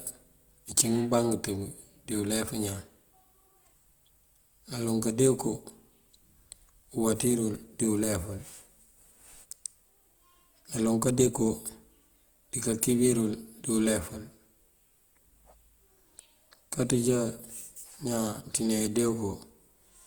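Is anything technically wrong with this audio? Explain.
Yes, there's Opus compression damage running through the whole speech clip, start to finish. The audio keeps its full bandwidth, reaching up to about 20.2 kHz, but the texture is clearly roughened: sustained sounds come across grainy and noisy rather than clean. That's the likely signature of Opus in its CELT music mode at a lean rate, something around 24 kbps. The encoder preserves each band's energy but, short on bits, fills in detail with folded or noise content, so you get grit instead of holes or swirl.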